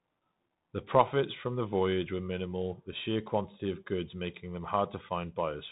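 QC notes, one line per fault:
Throughout: Bluetooth CVSD headset codec. Nothing above 3.8 kHz survives, so the speech sounds narrow and boxed. Each sample is a single up-or-down step, which fits a 64 kbps link. S sounds turn scratchy, loud bright sounds distort, and grainy hiss sits underneath.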